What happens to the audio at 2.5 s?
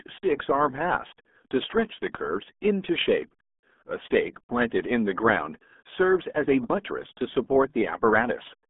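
At 2.5 s, as throughout, the speech carries RealAudio 14.4 codec damage: heavy low-rate coding, consistent with roughly 8 kbit/s, leaves it muffled and gargly, with nothing above 3.8 kHz.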